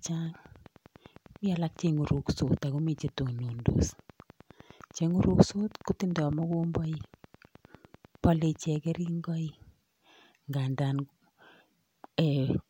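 A steady ticking runs under the speech from 0.06 s to 9.09 s, a train of clicks about 9.9 per second, roughly a hundred, near speech level, likely interference or a faulty connection.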